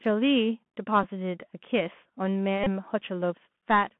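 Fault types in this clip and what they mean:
Bluetooth CVSD headset codec, throughout: the whole clip has passed through the narrowband headset codec, which encodes each sample at 64 kHz as a single up-or-down bit with an adapting step size. The speech sits in a telephone-like band of roughly 150 Hz to 3.4 kHz, with nothing bright above it. The damage is plainly audible: s sounds come out scratchy, loud high-frequency moments distort where the step cannot keep pace, and a granular hiss runs under the speech.
Bluetooth headset packet repeated, at 1.03 s and from 2.64 to 2.68 s: voice packets were lost on the headset link, and the chip decoded the previous packet's bits again in their place. At 1.03 s the gap is about 11 ms, which fits three lost packets and gives a brief buzz near 267 Hz. The second run covers about 26 ms, consistent with seven packets, and the repetition every 3.75 ms makes a short buzz near 267 Hz until good packets resume.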